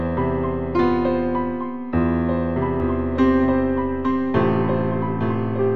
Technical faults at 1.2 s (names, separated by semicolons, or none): none